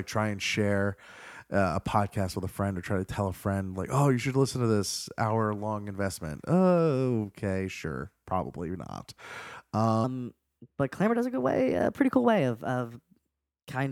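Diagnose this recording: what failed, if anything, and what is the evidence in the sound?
From 10.04 s onward, speech runs 1.19 times fast, about three semitones high. This is a section at the wrong speed, likely a playback clock mismatch.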